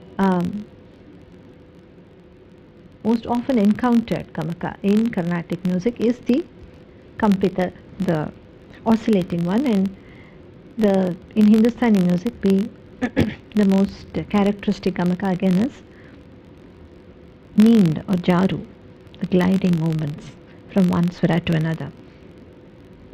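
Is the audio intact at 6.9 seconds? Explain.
No, it isn't. At 6.9 s, as everywhere else in the clip, you're hearing a filter restarted on every block. The filter loses its memory at each block boundary and starts again from silence, so every block opens with a tiny transient. Those clicks repeat at about 46.9 Hz, which fits a 1024-sample block, giving a low buzz that rises and falls with the level of the sound.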